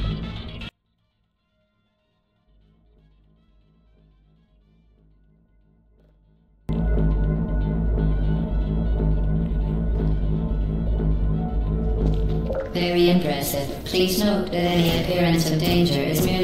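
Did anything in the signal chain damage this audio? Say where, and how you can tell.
Yes: one channel inverted, likely from a polarity reversal in the analogue wiring, from 0.69 s to 6.69 s. When the channels are summed, the material common to both cancels, and the level falls by about 37 dB. Only a faint difference signal survives.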